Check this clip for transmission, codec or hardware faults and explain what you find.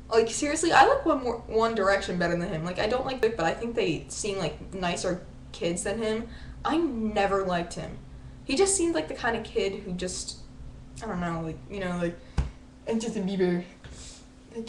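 There's one fault, at 3.23 s: damaged data in the compressed stream. Some of the data there came through wrong, so the decoder misread the frame, lost sync and had to hunt for the next frame header. You hear it as a brief glitch.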